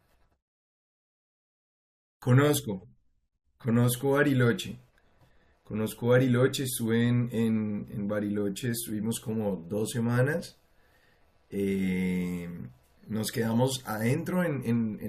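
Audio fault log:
Nothing stood out on listening to this speech recording.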